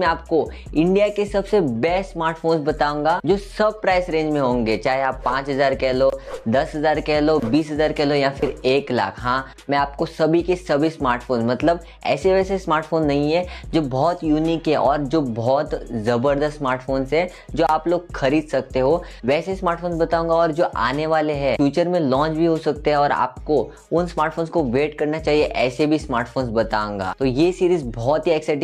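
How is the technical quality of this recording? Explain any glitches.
Nothing stood out as a glitch or technical problem on listening to this recording.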